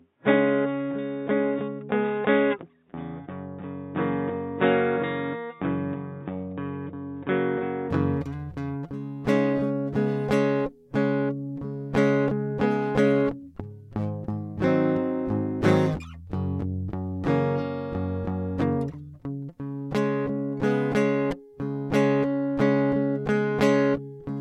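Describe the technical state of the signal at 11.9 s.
At 11.9 s the music plays through intact, with no dropout, click, distortion or other technical fault.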